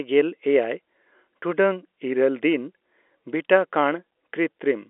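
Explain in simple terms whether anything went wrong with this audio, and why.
Nothing went wrong here: this is ordinary speech that sounds like a regular phone line, a bit thin because the phone system only carries the middle range of the voice, but with no glitches, dropouts or other problems anywhere in it.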